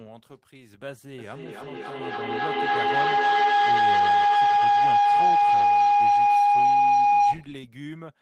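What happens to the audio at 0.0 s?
Nothing goes wrong at 0.0 s; the audio is intact at that moment.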